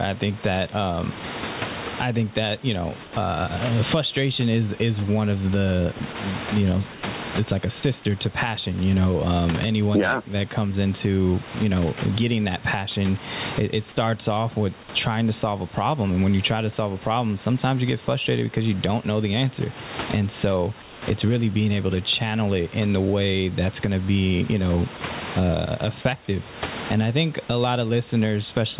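Gain pumping runs through the whole clip, likely from a fast limiter on an over-driven input, with the gain swinging by around 25 dB.

Sound dropped by the voice detector first occurs at 1.19 s, just after "think that um", where speech briefly turns to comfort noise. The detector likely misjudged the sound as background and stopped sending. The same fault recurs at 3.03–3.13 s, between "think that you know" and "uh frustration is is", then at 6.92–7.03 s, 7.80–7.83 s, 20.82–21.02 s, 24.97–25.01 s after "to be you know", and 26.01–26.05 s.

Between 5.98 and 6.15 s there is sound chopped by the voice detector. It likely toggles on and off, replacing about 40 ms with comfort noise, so the speech stutters. Throughout, nothing reaches above 4 kHz, consistent with a narrowband call codec.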